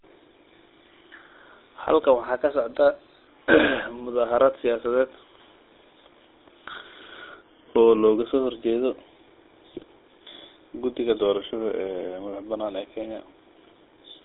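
A speech recording carried throughout by the GSM full-rate codec. The audio sits in a telephone band of roughly 200 Hz to 3.7 kHz, with nothing above. The codec models the vocal tract and drives it with a sparse, regularly spaced pulse excitation, which leaves the voice with a plainly audible buzzy, gravelly roughness, consistent with the 13 kbps full-rate coder. At 6.71–6.83 s and again at 9.71–9.84 s, GSM bit errors break in. Corrupted bits reach the decoder and scramble its filter, pitch and gain parameters, so for about 0.12 and 0.13 s the spectrum bends and the level jumps, producing squawks, pops and gargling. The second burst is the more damaged of the two, pointing to a higher error rate on the link at that moment.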